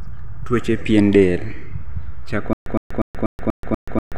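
At 2.53 s the speech breaks into a stutter with silent gaps that runs to the end of the clip. A 112 ms fragment plays, then 130 ms of digital silence, and the pair recurs seven times on a steady 243 ms cycle. A stalled player likely replayed its last buffered fragment on each retry, so the intended audio is lost. The true silence between identical bursts sets it apart from a seamless loop.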